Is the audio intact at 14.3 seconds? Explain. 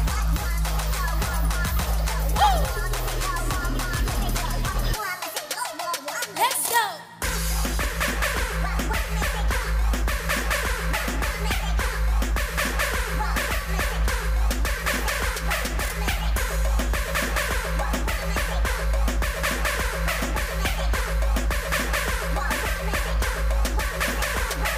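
Yes, the audio is intact at 14.3 seconds, with no dropout, click, distortion or other fault heard at that point.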